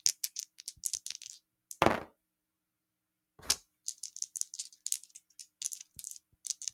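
Nothing in the signal path of these sounds draws attention to itself as a technical problem anywhere along the recording.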